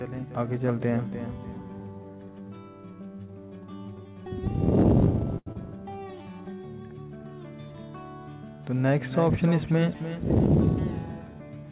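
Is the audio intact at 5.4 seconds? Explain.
No. A short stall from a late packet runs from 5.38 to 5.48 s. The jitter buffer ran dry, so the last sound was stretched for 83 ms and then resumed where it left off. It sounds like a held sustain with a slight buzz or dip. A spectrogram shows smeared, repeating bands, and the waveform shows a looped stretch.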